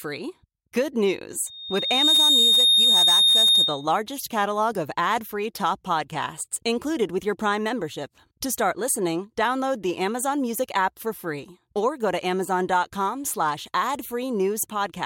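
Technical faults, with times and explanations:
1.46 to 3.88 s, loudspeaker feedback squeal: a single piercing tone at 3.7 kHz swells out of the speech in well under a second and settles at roughly 10 dB above it, holding until it stops at 3.88 s. The microphone was picking up the loudspeaker it fed, and at 3.7 kHz the loop gain exceeded one, so that frequency grew on each pass until something limited it or the loop was broken.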